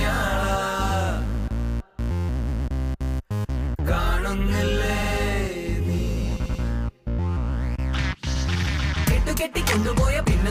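A short stutter jumps the sound back and replays a 93 ms slice at 5.02 s, again at 6.43 s where it repeats twice over 6.43 to 6.62 s, and once more at 8.34 s. These are repeated frames: a run of compressed frames was sent or written again, so the decoder played the same fraction of a second more than once. The 93 ms block fits four frames, and the repeats add about 0.37 s in total.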